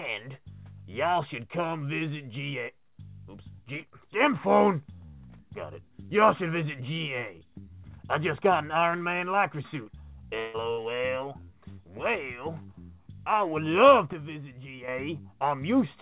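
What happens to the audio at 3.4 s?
Nothing goes wrong at 3.4 s: the audio runs on intact through that moment, carried by the normal call path with its narrow telephone-band sound and nothing above about 4 kHz.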